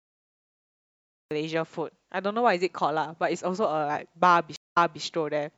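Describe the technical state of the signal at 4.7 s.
A stream reconnect runs from 4.56 to 5.02 s. The connection dropped, the player went silent for 0.2 s, then reconnected and started a fresh decoder mid-stream. The speech resumes 0.26 s earlier than where it cut off, so a short stretch is heard twice.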